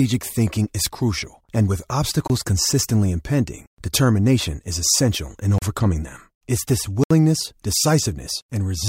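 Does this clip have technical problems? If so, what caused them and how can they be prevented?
Yes. The speech cuts abruptly to dead silence three times: at 2.28 s for 23 ms, at 5.58 s for 36 ms, and at 7.04 s for 70 ms. These are blocks of digital silence, where stretches of samples were replaced by zeros. The first gap fits a 1024-sample buffer, which points to the program not filling its output buffer in time. A larger buffer or higher processing priority would prevent this.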